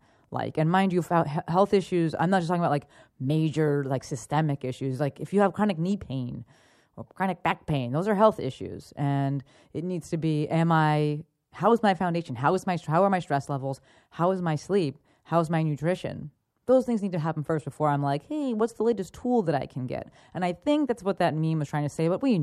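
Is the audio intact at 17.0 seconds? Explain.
Yes, the audio is intact at 17.0 seconds, with no fault present at that moment.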